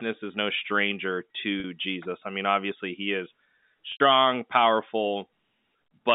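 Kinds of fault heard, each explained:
Packet loss with pitch repetition: gaps at 1.6 s (40 ms) and 3.92 s (80 ms) are filled by repeating the last pitch period, giving a brief buzzy hold. The longer gap fades to silence before a cross-fade. Waveforms show identical repeated cycles; spectrograms show frozen harmonic stripes.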